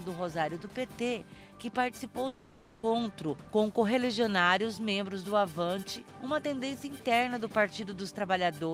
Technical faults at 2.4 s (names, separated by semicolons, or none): long network dropout